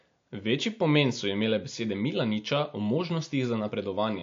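A speech recording with MP3 compression damage plainly audible throughout: nothing remains above 7.2 kHz, and the treble has a watery, swirling quality as weak frequency lines drop in and out between frames, likely from an encoder starved of bits, which fits roughly 48 kbps.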